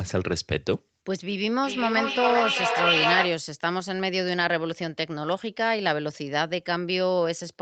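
Speech, and from 1.63 to 3.48 s there's feedback echo between two devices: a second device in the room replays the call, the mic catches it again, and the sound comes back roughly every 0.4 s, building to about 2 dB above the talker instead of fading.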